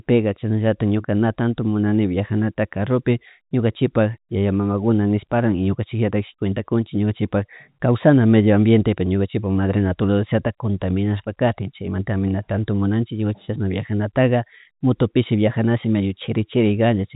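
Speech carried over G.711 A-law telephone coding, with the expected narrow band topping out around 3.8 kHz and no technical faults to report.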